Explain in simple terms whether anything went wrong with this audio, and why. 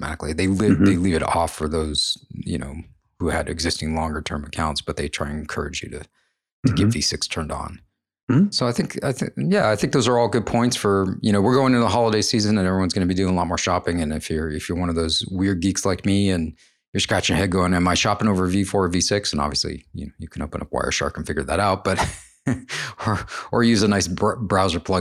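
Nothing went wrong with this audio; there is no fault to point to anywhere in the speech.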